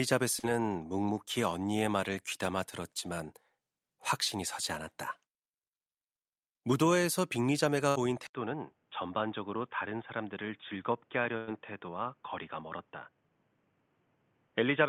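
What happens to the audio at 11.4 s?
At 11.37 s a held, fading sound replaces the audio for about 97 ms until 11.49 s, and about 100 ms of material never returns. This burst of packet loss happened because consecutive packets arrived too late or not at all. The receiver stretched the last received sound, faded it down, then resumed further on.

That moment also falls inside a dull, boxy stretch that runs from 8.27 s to the end. After a brief 80 ms silence at 8.27 s, the sound becomes slightly quieter, loses everything above 3.6 kHz, and gains faint new background noise. The cause is likely an input switched to a poorer, narrower-band device.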